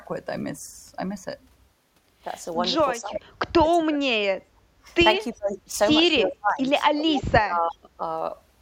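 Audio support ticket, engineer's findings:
Echo canceller likely suppressing near-end speech during double talk; near-end speech dips at 2.98–3.24, 3.61–4.87, 5.33–5.74, 6.08–6.70 and 6.95–8.02 s. Dips are shallower at first (roughly 15 dB), then deep (roughly 30 dB), lasting up to about a second.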